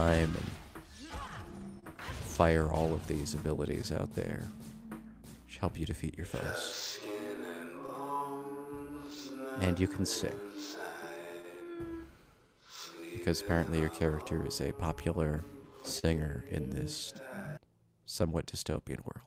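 Clock drift between sender and receiver runs through the whole clip, with the sender's clock about 2% slow, so the receiver's buffer keeps draining and needs constant patching.

Scattered short gaps occur from 0.77 to 7.90 s. Around seven lost or late packets were each filled by continuing the previous sound, about 30 ms at most, heard as brief ticks or smears.

Repeated timing corrections run from 0.86 to 18.73 s. The receiver keeps stretching short pieces, playing at 99% speed and adding roughly 300 ms overall, heard, if at all, as slight hiccups or an unsteady tempo.

A short stall from a late packet occurs at 15.99 to 16.05 s. The buffer ran empty and the last sound was held for 38 ms, raising the delay by 38 ms, with a faint buzz or dip.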